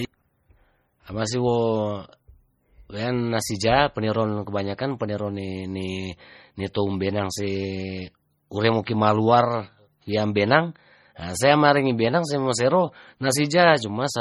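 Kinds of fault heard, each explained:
MP3 compression: The whole clip has heavy codec damage, with the speech taking on a watery, swirly quality as detail flickers in and out. That's likely MP3 at work: when the encoder runs short of bits it drops the weaker frequency lines, and they switch on and off from frame to frame. The amount of damage points to a very low bitrate, something like 32 kbps.
Pre-echo: At 8.85 s there's a brief smear of hiss, about 19 ms long, leading into a sharp attack. A transform codec spreads its quantisation noise across a whole block, so when an attack falls late in a block, the noise sized for the loud part leaks into the quiet stretch just before it. The result is that little hiss arriving early and the attack itself sounding softened.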